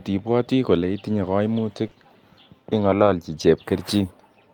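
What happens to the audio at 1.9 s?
Around 1.87 to 1.93 s there's a short concealed packet loss. About 40 ms of the speech didn't reach the decoder in time, so the receiver patched the gap by carrying the preceding sound forward, extending its pitch if it was voiced or using shaped noise if it wasn't, and then crossfaded back into the real signal. You hear it as a quick smear or wobble.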